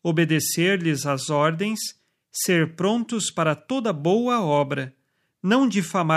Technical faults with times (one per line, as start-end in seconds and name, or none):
none